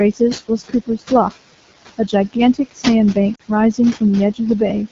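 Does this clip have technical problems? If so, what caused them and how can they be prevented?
Yes. Four kinds of fault are audible.

Noise suppressor artifacts run through the whole clip. The room noise, about 14 dB below the speech, is pulled down by about 16 dB in the gaps and then rises again under the speech. The suppressor estimates steady noise frame by frame and attenuates those bands. To prevent this, lower the background noise at the microphone so the suppressor can run with less attenuation.

The AMR wideband (HD Voice) codec damage is plainly audible throughout. The speech sounds rough and raspy, which fits the 8.85 kbit/s mode, one of the two lowest AMR-WB rates. At that rate the pulse-driven vocal tract model has too few bits to reproduce the excitation cleanly below 6.4 kHz, and the band above is only shaped noise. To prevent this, negotiate 12.65 kbit/s or higher whenever radio conditions allow.

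Speech cut by the noise suppressor occurs between 0.48 and 1.11 s, affecting roughly 150 ms with drops of up to about 14 dB, and again between 2.54 and 2.76 s, affecting roughly 100 ms with a drop of up to about 17 dB. In both places the suppressor treated low-level speech components as noise, so parts of the speech sound swallowed or faint. To prevent this, use a less aggressive suppression setting or one with better speech-presence detection.

Lost AMR speech frames cause a 40 ms break at 3.35 to 3.42 s, which fits two consecutive lost 20 ms frames. The decoder concealed the loss by reusing the last good pitch and vocal tract parameters at falling gain. The result is a brief drop to near silence, and the speech returns rough for a moment afterwards. To prevent this, improve radio link quality or enable stronger channel protection for the speech frames.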